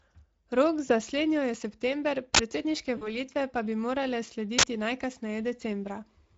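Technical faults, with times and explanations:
Throughout: Speex codec. The speech is coded with Speex at a setting that fits about 16.8 kbps, and the damage is plainly audible. Too few bits remain for the excitation signal. So the voice turns noisy and hoarse.
0.87 to 0.92 s and 2.97 to 3.19 s: VoIP packet loss concealed by the speech codec. About 20 ms of packets drop first, then about 40 ms just after "september predsedniške". The decoder stretches its last pitch and filter into a buzzy tone or coloured noise that fades. The weakened sound persists until "pa bi".
2.35 to 2.39 s and 4.59 to 4.63 s: uninitialised buffer. Each time, a block of about 46 ms plays before any audio is written to it. This fits a 2048-sample buffer. Leftover memory is read as samples, giving a short, loud burst of digital noise.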